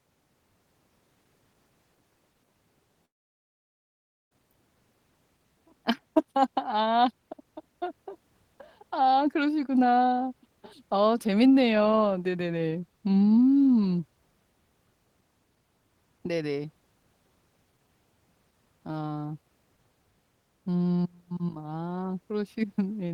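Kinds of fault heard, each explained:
Long network dropout (3.05 to 4.33 s): the speech cuts off, the last sound smears into a short fading buzz, then about 1.24 s of near silence follows before speech resumes with about 1.26 s gone, likely because packets stopped arriving and the receiver concealed the gap.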